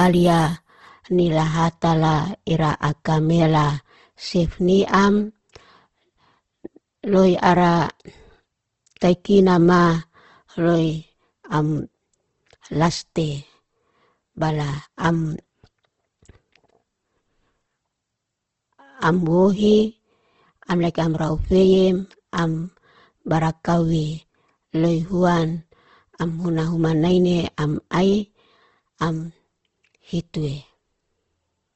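Opus compression, running throughout the speech, is the likely cause of the grainy, rough texture heard from start to finish. Nothing reaches above 12 kHz, and the damage is plainly audible. The character points to Opus in its music-oriented CELT mode at a low rate, around 16 kbps: each band keeps its energy, but the bits are too few for detail, so the encoder fills bands with folded or noisy content. Tonal parts of the voice turn hashy rather than swirling.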